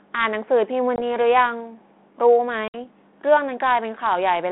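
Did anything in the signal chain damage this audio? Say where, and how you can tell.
Yes, network stage: packet loss on an ADPCM call. Hard silent holes at 0.96–1.03 s and 2.68–2.85 s, then a brief, slightly distorted recovery while the decoder's predictor resynchronises.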